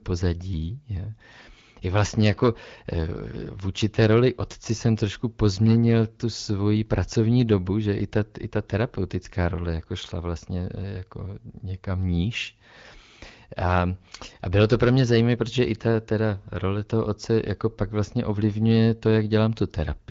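No technical faults can be heard anywhere in this speech.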